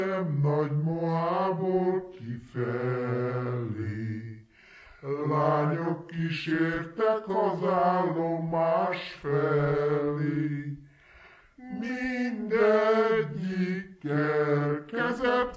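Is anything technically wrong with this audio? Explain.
Yes, there's a wrong sample rate problem running through the whole clip. Everything plays at about two-thirds speed and roughly 7 semitones low, which fits audio recorded at 24 kHz being played back at 16 kHz without any conversion, so pitch and tempo drop together.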